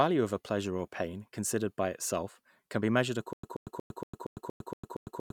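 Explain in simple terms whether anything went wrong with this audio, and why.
Playback likely stalled at 3.33 s, replaying its last fragment on each retry before running dry. The result is a stutter with silent gaps: a 0.13 s snippet repeats eight times, every 0.23 s, separated by 0.10 s of dead silence, until the end. The audio that should have played is lost.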